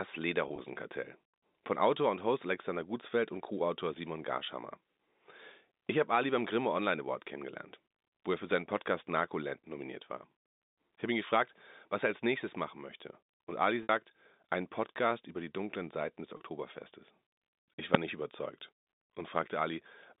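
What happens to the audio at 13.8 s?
Packet loss with pitch repetition at 13.83 to 13.89 s: about 60 ms of speech goes missing, and the receiver fills the gap by repeating the last pitch period while fading it out. The result is a brief buzzy hold that thins toward silence before the speech cross-fades back in.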